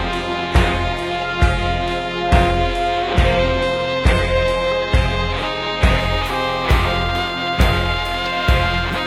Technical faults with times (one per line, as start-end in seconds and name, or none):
0.00-6.00 adaptive stream starting at a low bitrate